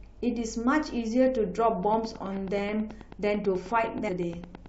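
From about 1.83 s right through to 4.67 s there's a train of clicks riding on top of the speech. They come at a steady, regular pace of roughly 9.3 per second, each one much the same shape, so it sounds like an even ticking that keeps going through the pauses too. There are around fifty of them, peaking a few dB above the speech. The likely culprit is interference from nearby equipment or a faulty connection or power supply.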